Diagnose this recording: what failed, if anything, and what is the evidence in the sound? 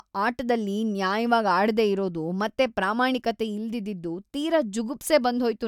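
Nothing in this speech recording points to a failure at any stage, from analogue wiring and conversion through buffering, processing, transmission, storage and playback, so there is no fault to diagnose.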